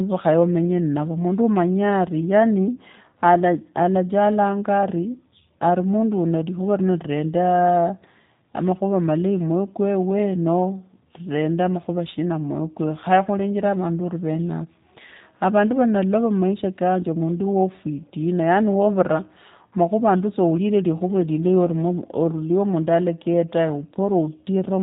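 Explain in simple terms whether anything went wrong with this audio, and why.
The speech sounds muffled and a little rough, slightly robotic, the way a cheap internet phone call does, from start to finish. That comes from the G.729 codec, a squeezing method made for phone calls over the internet. It doesn't send the actual sound. It sends a short recipe for rebuilding each tiny slice of the voice, and nothing above about 3.8 kHz is kept. The words stay clear, but the crispness and natural texture are plainly lost.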